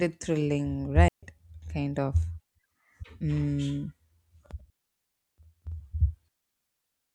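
A digital wireless link twice lost too much data, so the receiver muted with a very short fade. The result is digital wireless dropout: clean holes of near silence from 1.08 to 1.23 s (146 ms) and from 4.70 to 5.11 s (414 ms), with no noise bursts at either edge.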